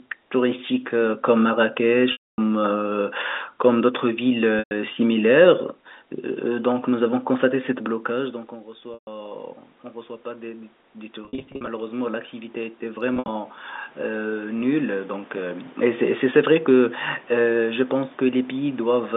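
At 2.12 s, about 260 ms of audio drops out. This is packet loss with pitch repetition. The receiver repeats the last pitch period, fades it to silence, then cross-fades back. At 4.59 s, a 120 ms loss briefly fades into silence.

From 6.49 to 9.53 s, automatic gain rises by about 4 dB. The control raises its gain slowly. Voice and room noise swell together. At 8.94 s, a 130 ms loss is bridged the same way.

From 10.23 to 15.79 s, the input drops by about 20 dB. The automatic gain climbs about 11 dB to compensate, and the background swells with it. Between 11.25 and 11.67 s, losses are scattered in runs of up to 50 ms, giving brief buzzy stutters. At 13.14 s, losses spread over 0.14 s, with a 70 ms run.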